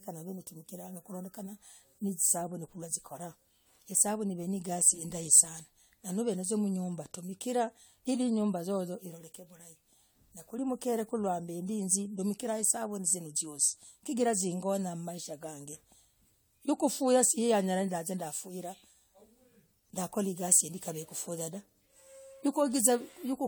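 From start to finish the speech has a swirly, hollow, smeared quality, with consonant attacks blurred, which points to generation loss: likely repeated AAC re-encoding, perhaps around seven passes at something like 96 kbit/s, each adding fresh quantisation noise and spectral holes.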